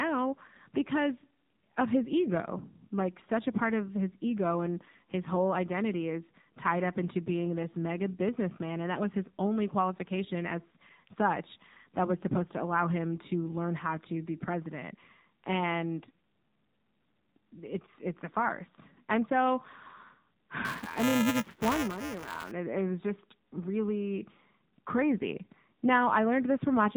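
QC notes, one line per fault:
Throughout, AMR narrowband mobile codec: The speech passes through AMR-NB at 7.4 kbps. Nothing above 4 kHz survives. The low bitrate makes the voice plainly buzzy and synthetic.
20.65–22.51 s, buffer tearing: A robotic buzz at 375 Hz rides the speech. Each buffer's write and read positions cross, which fits a 128-sample buffer. About a tenth of each holds audio roughly 5 ms old, with hard joins.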